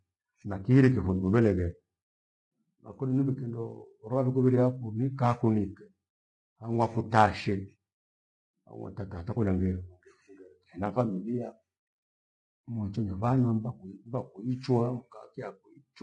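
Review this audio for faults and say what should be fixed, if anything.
Low-delay AAC compression runs throughout this speech. Voices sound rough and grainy, which fits AAC-ELD at roughly 32 kbps as the likely cause. Encode at a higher bitrate to prevent it.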